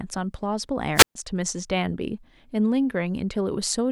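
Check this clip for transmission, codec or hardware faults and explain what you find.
A wireless microphone squelch dropout occurs from 0.94 to 1.15 s. The analogue FM radio link fades, so the receiver's squelch mutes the output for about 130 ms. The result is a brief rise of hiss and a near-silent hole before the speech returns.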